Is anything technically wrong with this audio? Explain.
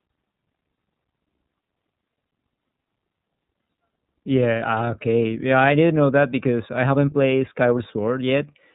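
Yes. Throughout, the speech sounds narrow, rough and faintly synthetic, with nothing above 4 kHz. This is iLBC codec damage: 30 ms frames coded independently, which fits its 13.33 kbps mode.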